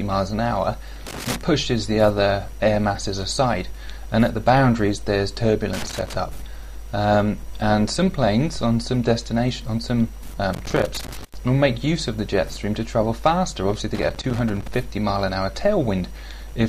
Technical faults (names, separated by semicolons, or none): loose connector crackle